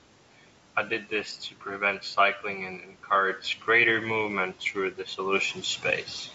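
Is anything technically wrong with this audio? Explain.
No, nothing is technically wrong.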